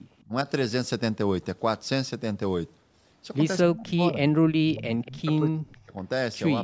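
At 0.19 to 0.24 s a faint echo leak appears: a delayed copy of the speech returns about 244 ms later, very low, likely because a far-end loudspeaker echo slipped past the echo canceller. On a spectrogram it shows as a weak, smeared repeat of earlier harmonics.

From 0.27 to 0.47 s the speech is briefly suppressed in double talk, dipping by roughly 15 dB over a few tens of milliseconds. The likely cause is the canceller ducking the talker while the other side spoke. Between 3.64 and 4.23 s the drops deepen to roughly 25 dB across about half a second, and from 4.65 to 5.97 s gaps of up to roughly 35 dB add up to about a second. The waveform envelope caves in, and the spectrogram thins in the upper bands or goes blank.

A second echo leak at 5.06 to 5.11 s, again 244 ms behind, is louder than the first but still faint. It appears as a ghost trace during the last suppressed stretch.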